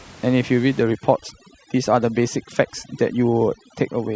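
From 0.83 s to the end, overdone noise removal sets in. A noise reducer pushed too hard shuts off frequency bands it mistakes for noise, taking quiet speech detail too. The room noise, about 23 dB below the speech, drops and breaks up into twinkling specks. That flickering, patchy loss is what sets it apart from a steady, dull low-pass cut.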